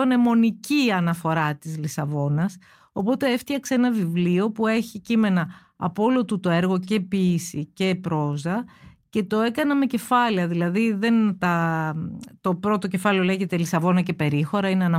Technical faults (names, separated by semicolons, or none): none